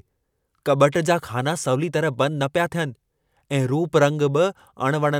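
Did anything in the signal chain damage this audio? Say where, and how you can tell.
No, nothing in the chain left an audible mark on this speech, so there is no stage to point to.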